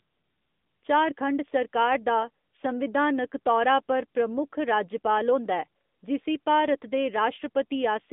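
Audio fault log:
Throughout, AMR narrowband mobile codec: the speech sounds boxed-in and plainly buzzy and synthetic, confined to a phone band of about 200 Hz to 3.6 kHz with nothing above 3.7 kHz. This is 8 kHz mobile coding, which fits AMR-NB at roughly 10.2 kbps.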